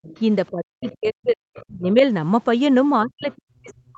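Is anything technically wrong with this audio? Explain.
Yes. A second voice bleeds faintly into the speech in short scraps at 0.03–0.2 s, 0.83–0.96 s, 1.54–1.65 s and 3.23–3.34 s, sitting roughly 20 to 30 dB below the talker. This is the other side's voice leaking through. The far end was likely playing on the talker's loudspeaker, and the echo canceller left part of that playback in the microphone signal, so brief fragments of it survive into the sent audio.

The talker's own voice also sinks sharply or drops out in pieces from 0.51 to 1.42 s, from 1.68 to 2.03 s, and from 3.03 s to the end of the clip. The deepest dips are large, around 30 to 40 dB. This is speech suppressed in double talk. Both sides were likely talking at once, and the echo canceller could not tell the talker from the loudspeaker echo, so it turned the whole microphone signal down. The leaked fragments at 0.83 s and 3.23 s fall inside these dips.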